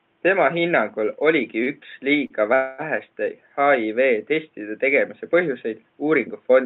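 At 1.63 s and again at 2.27 s, short stalls from late packets occur. The jitter buffer ran dry, so a sound is held about 32 and 36 ms, with a slight buzz or dip.

From 2.54 to 2.81 s there is a call audio freeze. The last sound stretches into a fading buzz or hiss for about 240 ms, likely because delayed packets emptied the buffer. Nothing is lost, but the speech resumes late.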